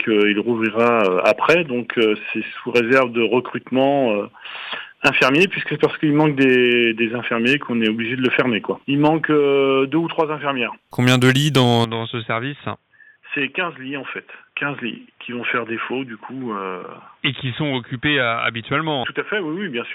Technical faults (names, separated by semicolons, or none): input switched to a poorer device